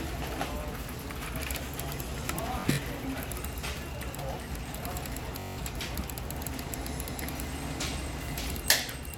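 At 2.60 to 2.79 s and again at 5.40 to 5.58 s, Bluetooth stutter sets in. Late or lost packets made the receiver replay its last short slice, so a brief machine-gun buzz fills each gap instead of the silence of a dropout. The sound resumes further on, as though it had kept playing. Roughly 85 ms goes missing in scattered bursts in the first event, and about 170 ms in the second.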